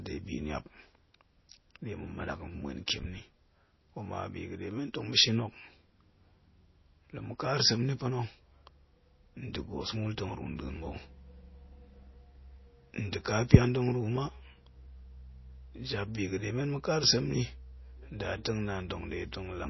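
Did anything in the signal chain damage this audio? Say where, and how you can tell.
Yes, at the codec stage, and it runs through the whole speech clip. Nothing is left above about 5.8 kHz, a hard treble ceiling, and the damage is plainly audible: s sounds turn watery and swirly, and consonant attacks smear. That's most likely MP3 compression at a very low rate, something like 24 kbps. Starved of bits, the encoder chops the top end and zeroes quiet frequency lines that keep flickering on and off between frames.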